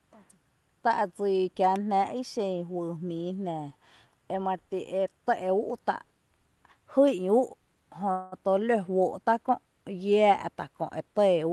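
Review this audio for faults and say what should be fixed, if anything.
A call audio freeze runs from 8.11 to 8.35 s. The sound stalls into a fading buzz or hiss, likely from delayed packets draining the jitter buffer. Nothing is lost; the audio resumes about 0.2 s late. A deeper adaptive jitter buffer and a steadier network path would prevent it.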